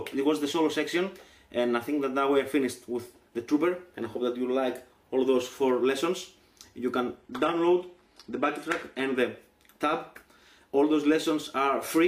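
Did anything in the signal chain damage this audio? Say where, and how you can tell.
Yes. The damage sits at the network and codec stage. From 7.17 s to 9.17 s the sound switches abruptly to a duller, thinner version, with nothing above 12.3 kHz. There is no gap at either edge. That is an adaptive stream at a lower bitrate. The player dropped to a cheaper rendition for two seconds, then recovered. The loss of top end and the added codec artefacts fit a fall from a full AAC stream to a very low-bitrate HE-AAC one.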